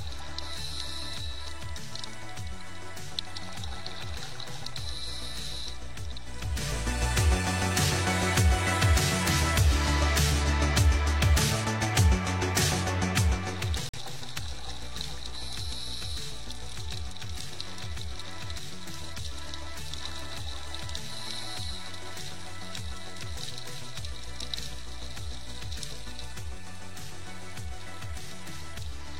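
The audio has a corrupt frame muted from 13.89 to 13.98 s: an abrupt 96 ms silence, fitting two rejected frames, with timing kept rather than concealed or skipped.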